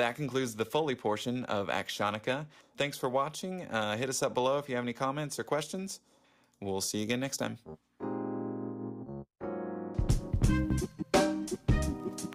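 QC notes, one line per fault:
No faults heard anywhere in this audio.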